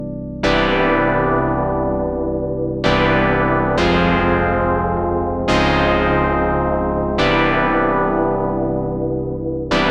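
Nothing stood out as a technical fault on listening.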